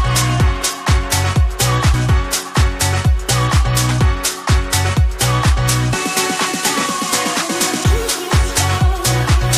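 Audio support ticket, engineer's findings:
Compressed frames skipped at 1.93 s: about ten frames, each 23.2 ms, lost or rejected by the decoder. Audio jumps ahead roughly 200 ms.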